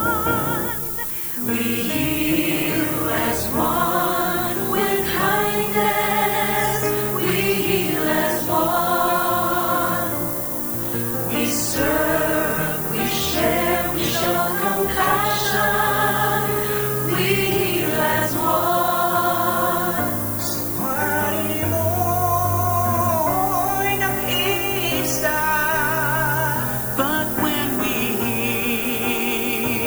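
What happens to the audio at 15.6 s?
Low bit depth with noise shaping runs through 15.6 s and the whole clip: 5-bit rounding error, pushed upward, gives a thin hiss rising toward the top, nearly as loud as the sound.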